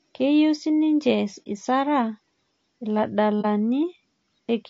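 Across the whole speech clip the voice is rough and grainy, with noise filling the gaps between harmonics and a thin, synthetic-sounding top band. This is low-delay AAC compression, likely AAC-ELD at a bitrate around 32 kbps. At this low bitrate its coarse quantization lets noise fill between the harmonics, unlike the steady hiss of background noise.

At 1.44 to 1.47 s, and again at 3.41 to 3.46 s, the sound fades into a brief silence of about 30 ms and fades back. This is AAC frame loss with muting. The overlapping windows soften the edges, unlike the abrupt edges of a hard dropout.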